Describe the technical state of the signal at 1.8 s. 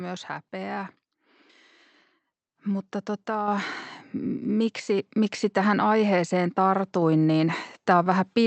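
At 1.8 s the speech signal is intact, with no dropout, distortion or other fault at that moment beyond the ordinary band-limited character of the Opus call path it passes through.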